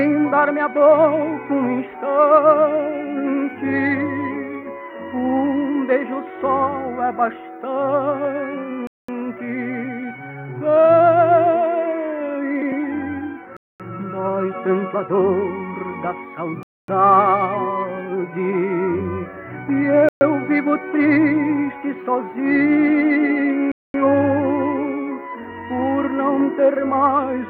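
The sound cuts to silence five times: at 8.87 s for 0.21 s, 13.57 s for 0.23 s, 16.63 s for 0.25 s, 20.09 s for 0.12 s, and 23.72 s for 0.23 s. Each is likely a Bluetooth stall. Delayed packets drained the headphone buffer, pausing playback.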